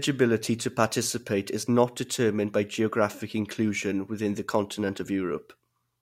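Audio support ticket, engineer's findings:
No faults found on review of the speech recording. Nothing heard that points to any component in the chain.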